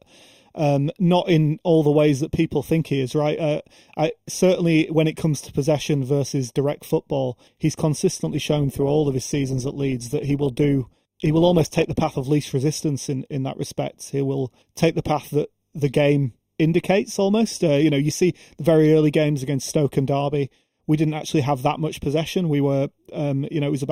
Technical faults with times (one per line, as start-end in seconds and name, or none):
0.00-23.91 channel delay (comb filtering)
8.26-12.26 adaptive stream at a lower bitrate